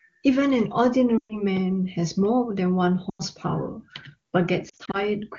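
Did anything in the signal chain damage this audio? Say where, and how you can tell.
Yes: lost AMR speech frames on the radio link at 1.18–1.42 s, 3.09–3.22 s and scattered across 4.69–5.02 s. The decoder repeats the last good frame with fading gain, so the spectrogram shows smeared harmonics thinning toward silence.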